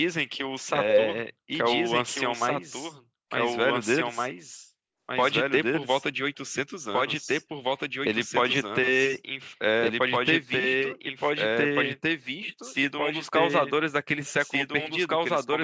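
Throughout the speech, a doubled audio track trails about two seconds behind, a few decibels quieter and unreverberant, likely from a second, slower capture path; waveforms show repeated, offset envelopes.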